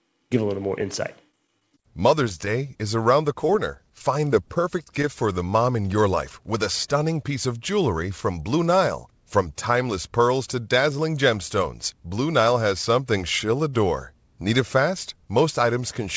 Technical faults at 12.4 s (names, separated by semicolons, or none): none